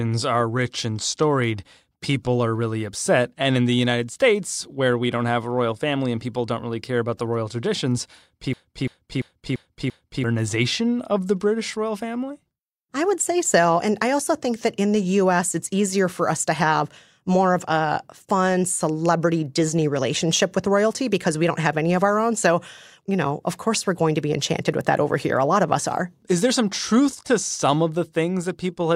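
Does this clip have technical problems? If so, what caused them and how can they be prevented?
Yes. Right after "about the royal traditions", a system hang loop runs from 8.53 to 10.24 s. The same 341 ms chunk repeats five times, a machine-gun stutter at about 2.9 per second. This fits a 16384-sample ring buffer replayed while the system froze, and about a second and a half of audio is lost. On a spectrogram or waveform, identical blocks tile side by side with abrupt seams. Keeping the audio thread real-time priority and adding a watchdog that mutes a stalled buffer prevents it.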